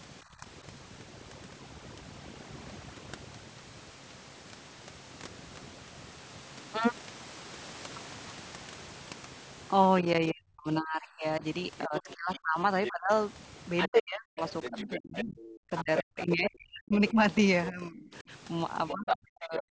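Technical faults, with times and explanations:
throughout, overdone noise removal: background pushed to near silence with twinkling specks, and quiet speech details vanish across the whole clip rather than in isolated dips.
0.37–0.46 s and 10.03–19.73 s, speech suppressed in double talk: the speech level drops in pieces, by about 10 dB in the first brief dip and up to about 40 dB later, over roughly five seconds in total. It is likely an echo canceller turning everything down while both sides talked. The gaps follow the other talker's activity, unlike steady noise-removal thinning.
11.78–19.17 s, other side's voice leaking through: a second talker comes through only about 5 dB below the main speech, likely loudspeaker echo the canceller missed, heard as separate speech rather than as dropouts.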